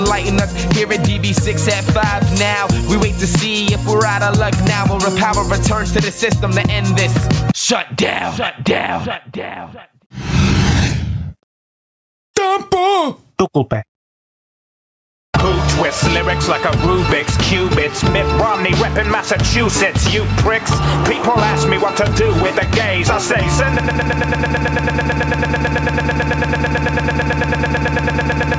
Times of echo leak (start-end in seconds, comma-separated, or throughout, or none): none